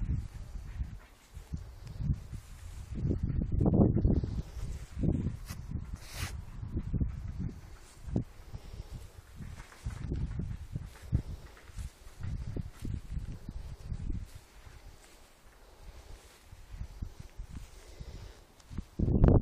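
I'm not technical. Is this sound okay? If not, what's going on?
Yes, this sound is okay, and nothing in it points to a technical problem. There is nothing here that needs fixing.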